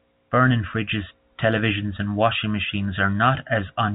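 No technical faults can be heard in this recording.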